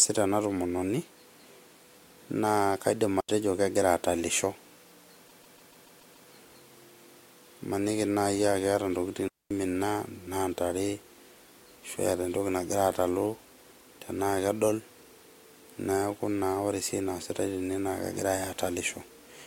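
Speech with two digital wireless dropouts and one stretch of repeated frames. At 3.20 to 3.29 s, just before "kegira atalisho", and again at 9.28 to 9.51 s, right after "keeta ntokitin", the sound falls into clean near-silence for about 82 ms and then 225 ms. The receiver mutes when the link loses too much data. On a spectrogram these show as sharp-edged blank columns with no noise bursts on either side. In the waveform they look like flat gaps.

From 5.27 to 6.28 s the audio stutters. The same 144 ms block plays seven extra times. This adds about 1 s to the clip. On a spectrogram it appears as identical patterns tiled side by side.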